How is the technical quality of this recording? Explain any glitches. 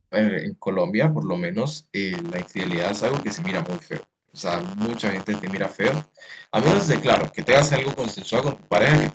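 The recording has three kinds of fault: repeated background dropouts, a persistent buzz, and a faint echo.

Background gated by the echo canceller, at 0.0–1.21, 1.76–1.93, 4.04–4.29, 6.05–6.16 and 8.56–8.7 s: the canceller ducks the microphone by about 40 dB, so room tone vanishes. The waveform shows near-flat gaps, and the spectrogram shows dark vertical bands.

Buffer tearing, from 2.12 s to the end: writer and reader cross inside each period, splicing in scraps of audio about 30 ms old. This gives a 100 Hz rattle during sound, visible as regular vertical striations.

Echo leak, 6.16–6.29 s: a faint copy arrives 248 ms late, about 35 dB down, likely residue the far-end canceller missed. On the spectrogram it appears as a ghost trace. Like everything in the clip, it stops at 8 kHz.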